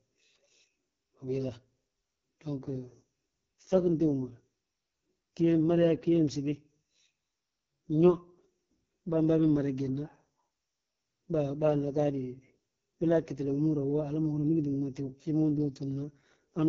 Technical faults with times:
0.00-16.68 AMR wideband (HD Voice) codec

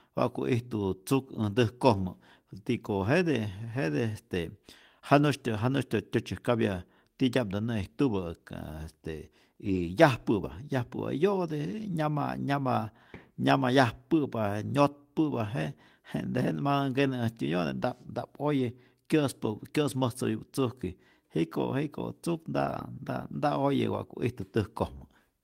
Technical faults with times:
1.37-1.43 lost packet rebuilt from error correction
9.65-9.79 lost packet rebuilt from error correction
10.51 lost packet rebuilt from error correction
18.59 lost packet rebuilt from error correction
22.61-22.79 lost packet rebuilt from error correction

